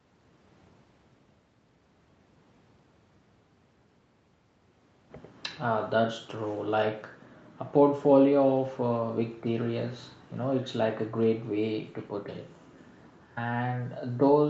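Nothing stood out on listening to this speech recording.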